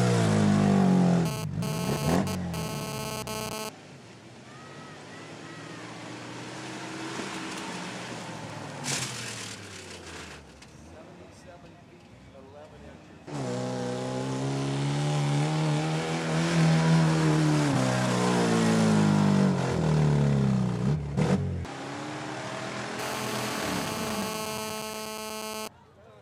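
A nearby 2G handset's radio bursts are being rectified by the audio circuitry, producing GSM phone buzz from 1.26 to 3.69 s and again from 22.99 to 25.68 s. The pulses arrive at 216.7 Hz, so a harsh, raspy buzz rich in harmonics sits about 8 dB below the wanted sound. In the first stretch it fits a data transfer. In the second it holds steady, as during a call.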